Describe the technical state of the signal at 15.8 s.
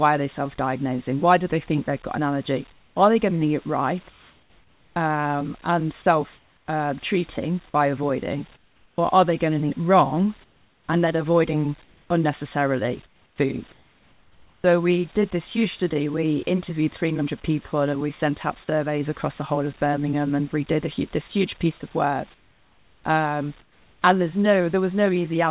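At 15.8 s the audio is intact, with nothing wrong beyond the narrowband sound of the call path, which carries nothing above 4 kHz, and a faint bed of room noise sitting about 35 dB below the speech.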